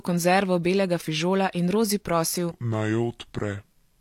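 From 2.51 s to the end, a section at the wrong speed: the speech drops to about 0.72x, roughly five semitones lower and dragging, likely from playback against the wrong clock.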